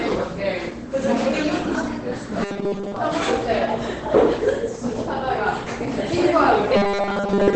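An everyday-sound recording, muffled and hoarse from start to finish, with nothing above 8.7 kHz and heavy codec damage. This is likely Opus compression at a very low rate, and the narrowed band and speech-style roughness point to SILK mode at around 12 kbps.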